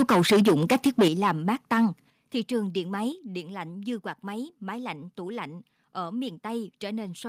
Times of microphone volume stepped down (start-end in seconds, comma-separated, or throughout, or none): 1.08, 2.10, 3.12